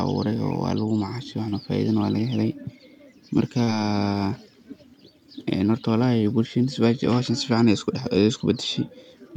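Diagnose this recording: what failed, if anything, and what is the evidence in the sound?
The network stage failed, with short concealed packet loss twice: about 20 ms missing at 1.49 to 1.54 s, right after "waa lagu macashe", and about 40 ms at 3.64 to 3.69 s. Each gap is a brief smeared patch where the decoder extended the preceding speech and then blended back into the real audio.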